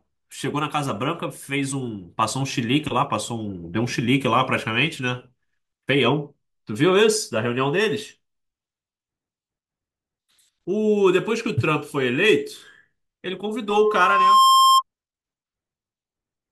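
A speech recording that runs cleanly until about 13.78 s, where a loudspeaker feedback squeal kicks in: a single tone near 1.1 kHz swells up over roughly three quarters of a second and ends up sitting around 10 dB above the voice before it cuts out at about 14.82 s. That's the mic hearing its own loudspeaker, with the loop gain tipping past one at that frequency so the tone keeps feeding itself until the loop is broken.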